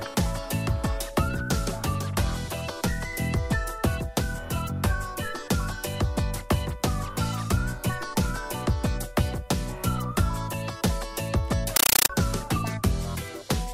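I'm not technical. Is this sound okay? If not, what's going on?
No. A compressed stream played as audio runs from 11.76 to 12.10 s. Encoded data, likely Dolby Digital, was played without decoding, so you hear loud static chattering about 31 times a second.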